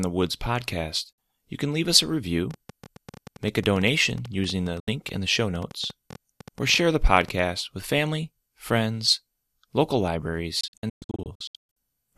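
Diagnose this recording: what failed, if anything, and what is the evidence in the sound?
Digital broadcast dropout, at the reception and decoding stage. The speech mutes from 1.13 to 1.18 s and from 4.80 to 4.88 s. From 10.61 to 11.77 s it breaks into scattered holes, totalling 648 ms, longest 120 ms. Each edge fades in 3 ms. Failed frames were muted, and that content is lost.

A train of clicks runs from 2.51 to 7.40 s. There are about 50 similar pulses at roughly 9 per second, unevenly spaced. They peak about 5 dB above the speech and tick through pauses too. The cause is likely interference from nearby equipment or a faulty connection or power supply.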